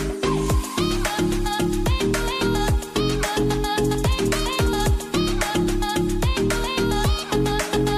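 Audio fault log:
No fault to log for this clip.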